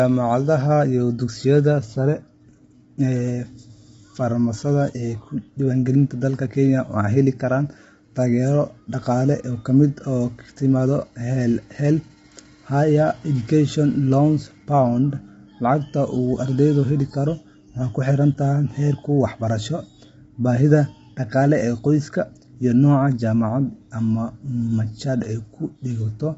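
Throughout, the speech sounds rough and grainy, with noise filling gaps between harmonics, likely low-delay AAC compression at a low bitrate; a spectrogram shows smeared harmonics and nothing above 7.8 kHz.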